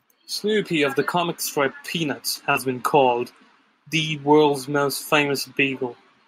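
From 0.4 to 2.94 s, automatic gain rising lifts the level by about 6 dB. The gain control judged the input too quiet and ramped it up slowly, so the speech and the background noise swell together. On a waveform the envelope widens steadily across those two and a half seconds, and on a spectrogram the noise floor brightens along with the speech.

During that rise there are four short patches of lost packets rebuilt from error correction, each 20 ms: 1.71–1.73, 2.03–2.05, 2.35–2.37 and 2.55–2.57 s. Each missing packet was replaced by the lower-bitrate backup copy carried in the next packet, so there is no gap, only a brief roughness and added noise. On a spectrogram each shows as a thin vertical slice with smeared harmonics and a grainier texture.

From 2.51 to 2.57 s, a short concealed packet loss covers about 40 ms of audio that never arrived in time. The decoder filled the hole by extending the preceding sound and then crossfading back into the real signal, which produces a quick smear or wobble. 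The last 20 ms of this stretch overlaps the final rebuilt packet.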